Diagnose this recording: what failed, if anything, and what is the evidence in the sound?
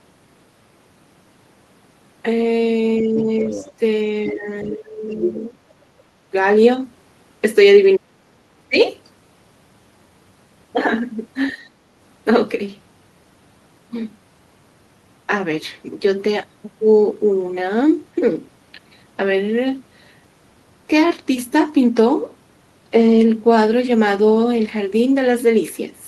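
The speech dips by about 5 to 25 dB at 3.02–3.64, 4.33–5.55, 7.98–8.07, 8.69–8.78 and 11.52–11.63 s. This is speech suppressed in double talk, likely call-processing echo cancellation ducking both voices.

A second voice leaks through, about 5 to 20 dB below the speech, at 3.51–3.72, 4.28–4.74 and 5.12–5.32 s. This is the other side's voice leaking through, likely residual loudspeaker echo.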